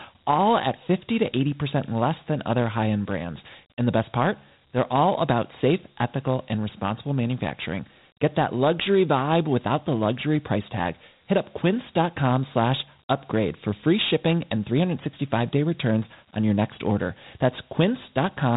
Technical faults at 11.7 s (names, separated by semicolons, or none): Dialogic VOX ADPCM